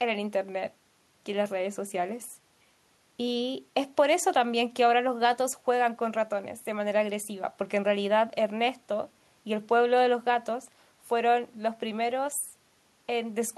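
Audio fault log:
Nothing to log here; I heard no faults anywhere in this speech clip.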